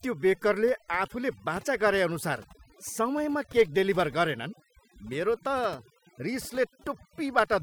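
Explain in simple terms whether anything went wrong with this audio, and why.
Overdone noise removal, throughout the clip: a cleanup tool set too strong silenced bands near the noise, so pauses twinkle and quiet parts of the speech vanish with them.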